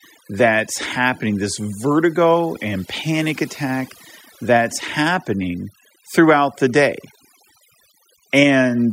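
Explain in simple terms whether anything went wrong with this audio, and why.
A noise reduction tool was pushed too hard on this speech, a case of overdone noise removal running through the whole recording. The tool tries to tell background hiss apart from the voice, then shuts off any slice of the sound that looks like noise. Set this strongly, it also removes the quieter parts of the voice. In the gaps the background drops and breaks up into twinkling specks.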